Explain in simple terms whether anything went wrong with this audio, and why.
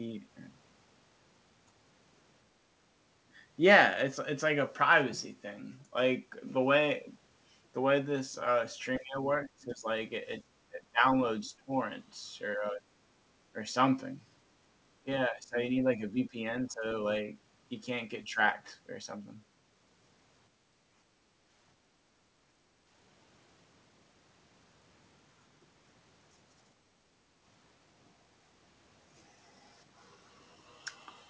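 The talker's speech fades and breaks up around 8.98–9.88, 10.7–11.72, 12.56–12.85, 15.01–16.84 and 18.27–18.39 s. This is likely speech suppressed in double talk: the echo canceller turned the talker down while the other side spoke.

Later, at 20.51–22.74 and 26.98–27.43 s, the background room sound dips. That is background gated by the echo canceller while the loudspeaker played.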